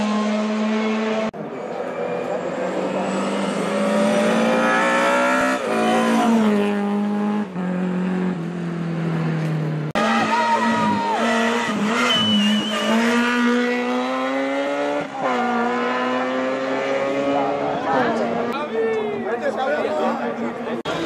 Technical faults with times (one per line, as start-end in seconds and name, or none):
5.41 compressed frames skipped